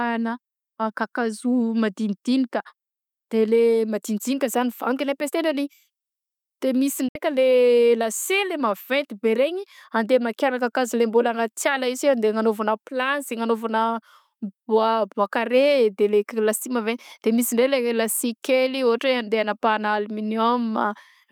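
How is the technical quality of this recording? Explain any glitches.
The recording has one glitch, a short digital broadcast dropout from 7.08 to 7.16 s. The receiver muted after corrupted frames, so the speech fades out within about 3 ms and a gap of roughly 64 ms is lost, which fits two dropped frames.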